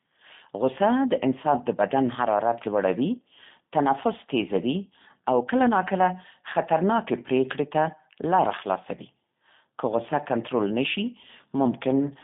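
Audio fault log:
throughout: G.729 codec. Speech is confined to 150 Hz to 3.6 kHz, with nothing above 3.8 kHz, and has a plainly audible rough, synthetic edge. Each 10 ms frame is rebuilt from a vocal tract filter, a pitch predictor and sparse pulses, which fits an 8 kbit/s stream.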